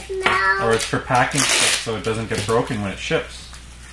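No technical faults are audible.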